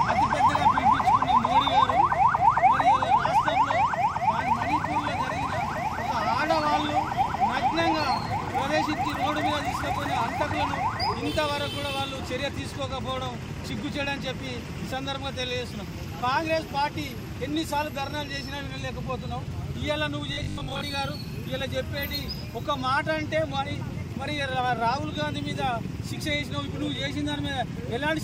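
From 20.33 to 20.81 s the sound collapses into robotic sound from repeated short buffers: a rigid, metallic buzz at 50 Hz that still loosely tracks the contour of the material. The fixed 50 Hz pitch fits a 20 ms block being replayed over and over, with most of that half-second made of repeats rather than fresh audio. The likely cause is audio arriving too late at the playback buffer, so the software loops its last block while the real signal is skipped.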